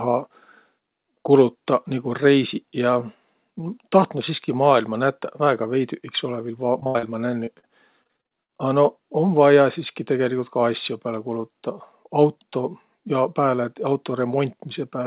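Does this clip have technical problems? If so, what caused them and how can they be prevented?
Yes. Two kinds of fault are audible, both from lost call packets, heard through a band that stops at 4 kHz, which fits a narrowband G.711 mu-law call path at 64 kbps.

Repeated packet loss (robotic sound) occurs from 6.80 to 7.05 s, just after "iks olõ viil", and again from 8.03 to 8.50 s. The first stretch has four gaps totalling 160 ms. The longest is 72 ms, and about 60% of the span is filled in. The second has seven gaps totalling 200 ms. The longest is 40 ms, and about 40% is filled in. Each hole is patched by stretching the previous sound, and the holes come so close together that the audio turns choppy. On a spectrogram, harmonics run flat and copied across each patch, with seams at the edges. The waveform shows repeated, near-identical cycles. Prevention: use a steadier network path with forward error correction or redundancy enabled.

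Short concealed packet loss occurs at 7.45 to 7.49 s, where 20 ms went missing, and at 7.59 to 7.65 s, where 40 ms went missing. The decoder filled each hole by continuing the last sound, then blended back into the real signal. This is heard as a brief smear or wobble. On a spectrogram, a thin vertical band looks smoothed or repeated. The waveform shows a short stretch that copies the cycles just before it. Prevention: add packet redundancy and a slightly deeper jitter buffer.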